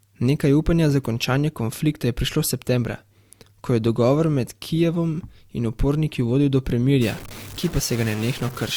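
Throughout the recording, the speech was likely passed through two lossy codecs in turn, an MP3 stage and then Opus. This transcoding between lossy codecs leaves two kinds of compression artefacts layered together.

At 3.75 s, just before "je dogovor med", a couple of samples were likely dropped from the stream. The waveform jumps straight to a later value, which produces a single sharp click. The same dropped-samples click occurs at 6.36 s, right after "in uporniki".

From 7.02 s to the end, a data bit is likely stuck at a fixed value in the converter or data line. About half of the sample values are pushed off by that bit's weight, giving distortion that follows the waveform, and the quiet gaps fill with noise.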